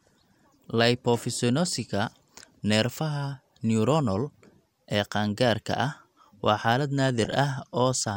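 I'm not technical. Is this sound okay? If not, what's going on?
No, there are two short glitches of DAB burbling in this speech, from 3.82 to 3.96 s and from 7.06 to 7.32 s, just after "qaangaarka ah waa xaalad". Each is a brief patch of short noise blips. Digital radio sends sound as data, and with weak reception a small share of that data arrives damaged. Some damage slips past the error correction, so short blips of noise appear in certain pitch ranges.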